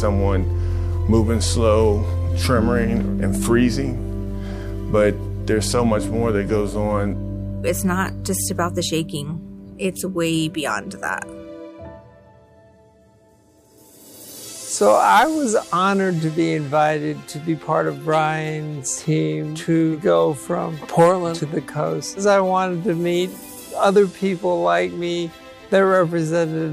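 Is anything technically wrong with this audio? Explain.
No, there is nothing technically wrong to report here.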